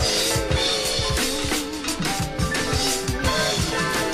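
No technical faults can be heard anywhere in the audio.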